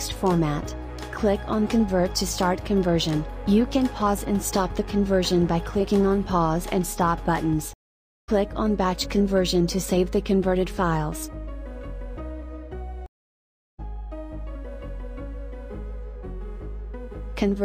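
At 7.73 s a stream reconnect breaks the sound: about 0.55 s of silence, then it resumes roughly a third of a second further on. At 13.06 s a second one leaves 0.72 s of silence and skips about half a second. Unlike a plain dropout, the restarted decoder picks up later material.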